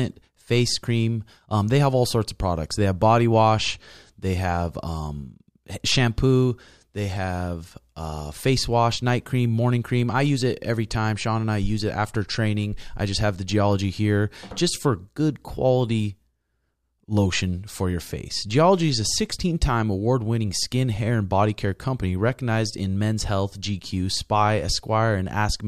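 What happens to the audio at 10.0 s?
Nothing goes wrong at 10.0 s; the speech plays through that moment intact, with no dropout, click or other fault.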